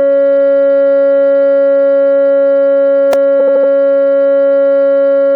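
At 3.13 s a brief buzzy click in the music is a repeated buffer: a tiny 2.9 ms chunk, which fits a 128-sample buffer, replayed twice because fresh audio arrived late. From 3.39 to 3.71 s a stutter repeats the same 78.4 ms fragment four extra times. These are repeated frames, a run of compressed frames written or sent again, adding 313.5 ms to the music.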